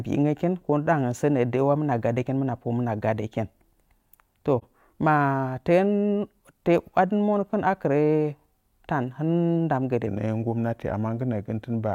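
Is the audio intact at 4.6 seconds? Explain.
No. An AAC frame loss with muting occurs from 4.58 to 4.64 s: the decoder zeroed the spectrum for about 43 ms, which fits a single lost frame. Overlapping windows fade the speech out and back in, leaving a brief dip.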